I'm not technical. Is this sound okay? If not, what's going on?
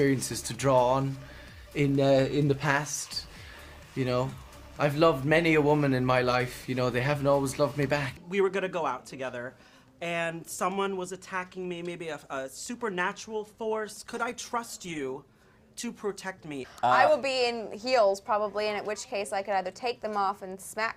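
No. From about 13.6 to 16.1 seconds there's a call bitrate drop: the connection briefly seemed weaker, so the call squeezed the sound into far less data. For those two and a half seconds the audio sounds coarser and rougher, then recovers.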